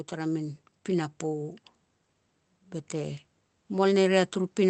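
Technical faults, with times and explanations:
2.9–4.7 s, automatic gain rising: the gain control judged the input too quiet and raised its gain steadily, so speech and background noise swell together through the end.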